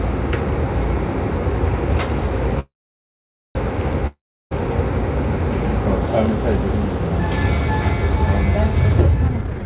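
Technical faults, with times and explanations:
2.59 to 3.57 s, call audio freeze: the last sound decays as a brief buzz, then about 0.85 s of near-silence before the audio resumes exactly where it stopped. Nothing is lost, which sets it apart from a dropout. The likely cause is delayed packets draining the jitter buffer, adding almost a second of delay.
4.07 to 4.53 s, long network dropout: a short fading buzz, then roughly 0.34 s of silence. The audio returns further on, with about 0.44 s skipped rather than merely postponed. Missing material, not a pause, marks this as a likely loss of packets rather than a freeze.
9.28 to 9.65 s, jitter buffer speed-up: the audio runs at about 195% speed with its pitch unchanged, sounding rushed, as roughly 0.4 s is trimmed in small pitch-period slices to shed excess buffered delay. The steady pitch distinguishes it from a simple playback-rate change. 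The 4 kHz ceiling of the A-law call path stays throughout.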